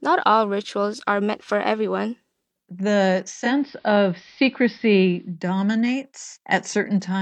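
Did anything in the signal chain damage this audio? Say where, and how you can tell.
Yes, at the radio receiver stage: the speech shows digital radio blending to analogue from 3.28 s to 5.37 s. The receiver lost its digital stream and cross-faded over 286 ms to the station's AM broadcast, then back. On a spectrogram, a faint broadband hiss floor appears in that span roughly 40 dB below the speech. The waveform shows a level step of about 1 dB at each blend.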